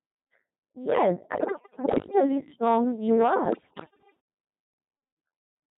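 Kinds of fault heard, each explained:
Codec 2 vocoder: The speech is rebuilt from pitch, voicing, energy and spectral envelope alone, so it sounds heavily robotic and buzzy throughout, fitting a 2.4 kbit/s mode.
Bit errors on digital voice radio: Flipped bits corrupt whole frames from 1.34 to 2.20 s and 3.46 to 4.20 s. Pitch, level and tone jump into warbles.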